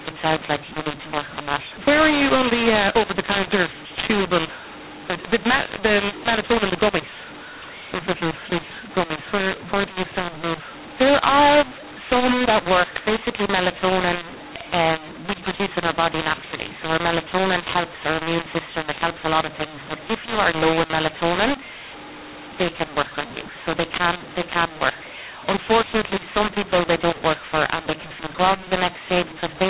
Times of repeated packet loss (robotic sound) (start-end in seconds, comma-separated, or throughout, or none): none